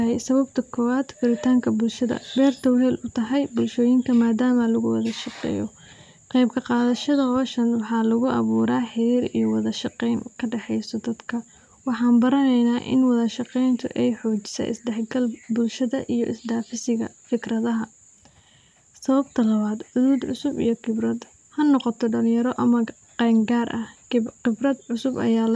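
No technical faults can be heard anywhere in the recording. Nothing interrupts or alters the audio at any point.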